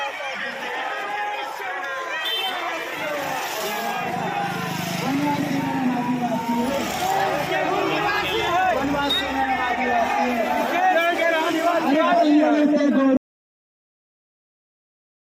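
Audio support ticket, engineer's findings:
Audio dropout to silence at 13.17 s, running to the end of the clip: sound cuts off mid-flow into silence, no room tone. Likely input loss upstream (disconnected device, failed link or mute) while the recorder kept writing silence. Content after cut unrecoverable.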